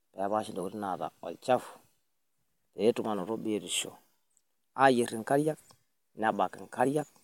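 No technical faults are audible in this recording.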